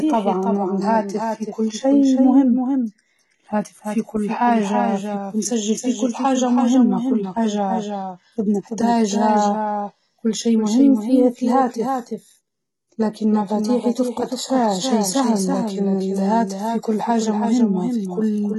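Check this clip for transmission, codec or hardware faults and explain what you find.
Two faults run through the whole clip. Throughout, every sound is repeated about a third of a second later, a few decibels quieter and without room decay: a doubled audio track, likely a second, slower capture path mixed in. Throughout, sibilants sound gritty and lispy, and nothing reaches above about 11.8 kHz. That points to heavy HE-AAC compression at roughly 16 kbps, likely with the treble rebuilt from copied lower bands that no longer line up with the real harmonics.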